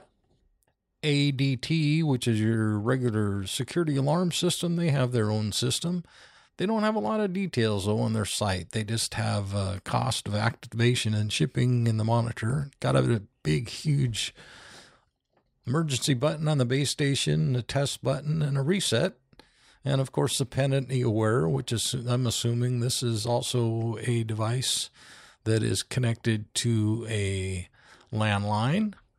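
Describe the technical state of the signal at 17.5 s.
At 17.5 s the speech signal is intact, with no technical fault present at that point.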